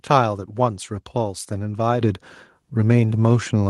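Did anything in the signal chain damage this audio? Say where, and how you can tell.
Yes. At 2.01 s the microphone volume is stepped up. The speech and the background noise floor jump together by about 9 dB in one instant step, partway through the clip. That points to call processing: the software judged the input too quiet and raised the device's input gain all at once. A talker leaning closer would lift only the voice, and gradually. A compressor or limiter would ride the level continuously. Here the noise floor moves in lockstep with the voice and then holds. The band-limited top end, which fits an Opus call path near 12 kHz, is unaffected by the step.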